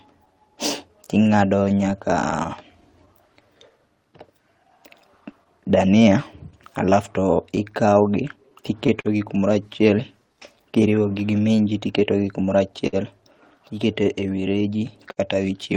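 Running under the whole clip is clock drift between sender and receiver: the sending side's clock runs roughly 4 percent slow, so the receiver keeps running short of audio and has to stretch things out. That drift shows up as small timing wobbles that keep turning up.

From 0.25 s to 9.08 s there are scattered short gaps, around twenty of them, none longer than about 50 ms. The receiver covers each lost or late packet by carrying the previous sound forward, about 0.3 s in total, so you hear brief ticks and smeared bits in otherwise clear speech.

Overlapping that, from 0.34 s to 14.77 s, come repeated timing corrections. To keep pace with the slow sender, the receiver keeps lengthening short pieces, effectively playing at 98 percent speed and adding around 0.3 s overall. Every edit goes the same way, though the edits are unevenly spaced.

Near the end there are two short stalls from a late packet, at 12.87 to 12.96 s and 15.12 to 15.20 s. 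Each time the buffer ran dry, and the last sound is held for 57 ms and then 53 ms until the packet turned up. Nothing is lost, but those moments hang with a faint buzzy dip.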